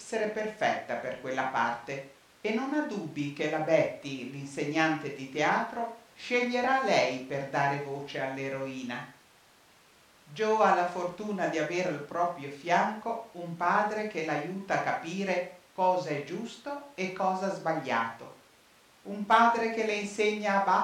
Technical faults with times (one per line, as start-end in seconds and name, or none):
none